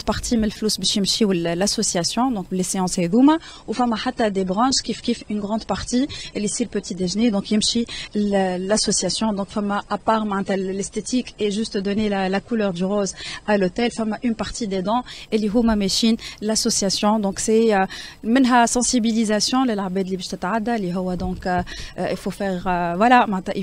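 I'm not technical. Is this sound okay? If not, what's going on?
No. From about 3.11 s to 15.11 s the sound suddenly turns duller and smeary, with the crisp top end missing (nothing above 9.7 kHz), then snaps back to full clarity. There is no gap either time. This is an adaptive stream at a lower bitrate: when the connection slowed, the player switched to a smaller, more heavily squeezed version of the audio to keep it playing, which costs detail until it switches back.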